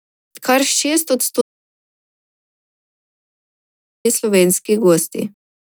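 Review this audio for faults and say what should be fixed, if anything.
An audio dropout to silence runs from 1.41 s to 4.05 s, about 2.6 s of silence with no room tone, likely from the input being lost while recording continued. The speech in that span is gone. Monitor input levels and secure connections during capture.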